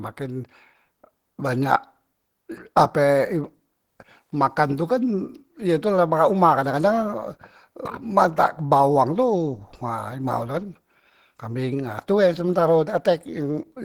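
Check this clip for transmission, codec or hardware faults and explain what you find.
One codec fault runs through the whole clip. From start to finish the speech sounds hoarse and grainy. The likely cause is Opus compression at a low rate, which fits about 16 kbps in its hybrid speech mode. Unlike MP3, it leaves grain rather than swirling holes.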